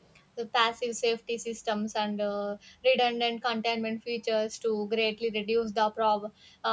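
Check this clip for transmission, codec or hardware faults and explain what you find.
One fault turns up, right at the start. From 0 to 0.12 s there is an echo leak: the loudspeaker side's echo canceller likely left part of what its microphone picked up, sending it back 434 ms late. It sounds like a very faint, brief ghost copy of the speech, far beneath the main voice. The band ending at 8 kHz comes from the call microphone processing and is not a fault.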